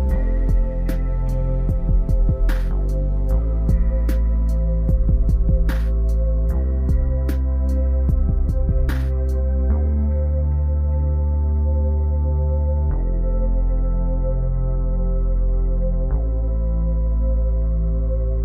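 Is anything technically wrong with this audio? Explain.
No, nothing technically wrong can be heard in this audio. There are no problems anywhere in it to point to or explain.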